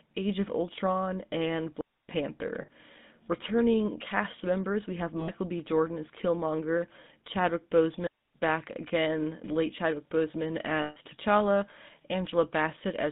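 Buzzy, gravelly speech squeezed into a narrow line band of roughly 150 Hz to 3.7 kHz runs through the whole recording. The GSM full-rate codec damage is plainly audible and fits a 13 kbps stream, which rebuilds the voice from a vocal-tract model fed by a sparse pulse excitation. Three brief metallic rings, at 2.62 to 2.69 s (60 ms), 5.20 to 5.30 s (80 ms) and 10.82 to 10.97 s (140 ms), come from lost GSM frames. In each gap the decoder repeats the last good frame instead of passing real signal.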